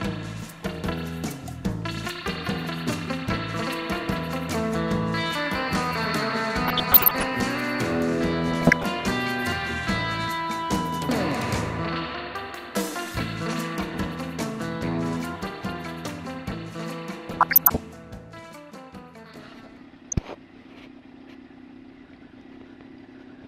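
DAB burbling occurs at 6.65–7.28 s, 8.48–8.86 s, 17.27–17.79 s and 20.12–20.31 s. Bit errors of roughly 0.5 to 1 percent slip past error correction and corrupt sub-band samples and scale factors, producing short noise blips and level jumps in single sub-bands. On a spectrogram, isolated frequency bands flare as short rectangular blocks.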